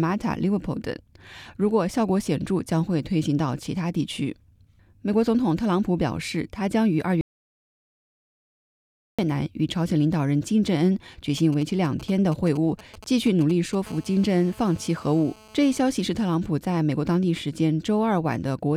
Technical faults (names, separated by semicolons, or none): audio dropout to silence; GSM signalling bursts; GSM phone buzz